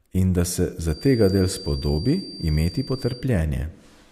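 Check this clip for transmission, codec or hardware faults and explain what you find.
One fault is present in this speech clip. From 0.82 to 3.31 s a feedback whistle sits at 4.7 kHz, well below the speech, likely a speaker-to-microphone loop held just short of runaway. Unlike full howl, it swells and fades slowly without building.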